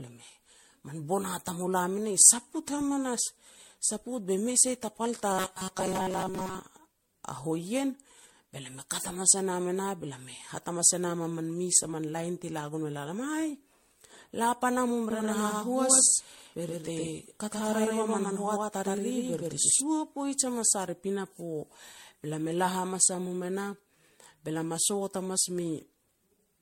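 Speech throughout carries generation loss, likely from being re-encoded as MP3 around seven times, at a rate that fits 64 kbit/s, leaving it swirly, hollow and blurred, with a spectrogram that is empty above 16.5 kHz and shows smeared, holed texture. From 5.32 to 6.60 s there is robotic sound from repeated short buffers: most of the audio is replaced by repeats of a snippet that fits a buffer of roughly 5.3 ms, forcing a rigid metallic buzz at 188 Hz that a spectrogram shows as evenly spaced horizontal lines at multiples of 188 Hz. Just after "la pana mum", from 15.11 to 19.81 s, a doubled audio track appears, likely a second copy mixed in about 100 ms late at roughly equal level, so on the waveform every onset repeats 100 ms later, and the copy starts and stops abruptly.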